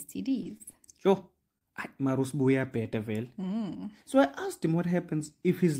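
A short piece of speech, and the trouble is all packed into the first couple of seconds. There are two spots of short concealed packet loss, at about 0.43 to 0.47 s and 0.72 to 0.75 s. In each, roughly 20 ms of audio never arrived in time, so the decoder carried the last sound forward to cover the hole and then eased back into the real signal. You hear that as a quick smear or wobble, and whatever fell in the gap is just gone. Mixed in with those are two short stalls from a late packet, at 0.57 to 0.62 s and 1.58 to 1.63 s. Here nothing is lost. The jitter buffer ran dry waiting on a packet, so the receiver held the current sound for about 27 ms and then 29 ms, picking up where it left off once the packet landed. The result is a sound dragged slightly too long with a faint buzzy dip, and everything after each stall sits that much later.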